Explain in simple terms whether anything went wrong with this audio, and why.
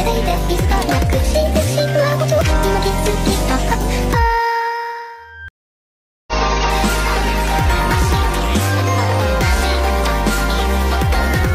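Something did go wrong: a stream reconnect. Around 5.48 s the connection to the source dropped, so the player stopped, reconnected, and started decoding again from wherever the stream had reached. You hear this as a gap of silence lasting about 0.8 s, ending near 6.33 s. When the audio returns it has jumped ahead by roughly 0.7 of a second, so a short stretch of the sound is simply missing.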